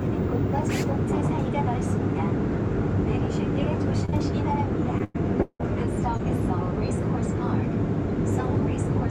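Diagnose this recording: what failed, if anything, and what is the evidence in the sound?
Network stage: short concealed packet loss. Audio failed to reach the decoder in time twice back to back, around 4.05 to 4.14 s, and again at 6.17 to 6.21 s. Each hole of roughly 20 ms was patched by extending the preceding sound, leaving a brief smear or wobble.

Network stage: repeated packet loss (robotic sound). From 4.98 to 5.65 s, five separate holes open in quick succession, the longest about 170 ms, so nearly half that stretch is synthesised concealment. The repeated extrapolation makes the sound choppy, with fragments missing.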